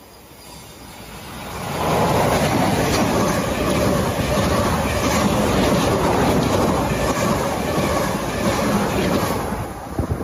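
Gain pumping runs throughout: the gain swings by around 5 dB, likely from excessive input gain driving a fast limiter.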